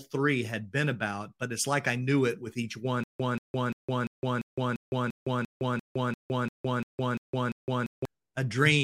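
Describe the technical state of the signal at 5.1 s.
Stutter with silent gaps, 3.04 to 8.05 s, just after "it with each one": a likely stalled stream replays a 184 ms fragment every 345 ms, separated by 161 ms of digital silence.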